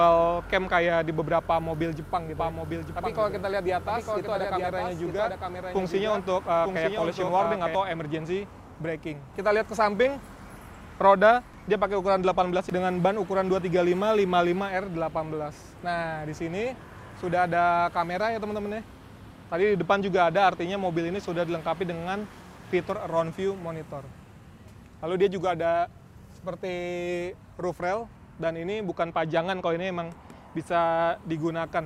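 From 2.37 s to 7.75 s, a doubled audio track: a second full-band copy trails about a second behind, roughly 5 dB quieter, starting and stopping abruptly, likely from a duplicate capture path.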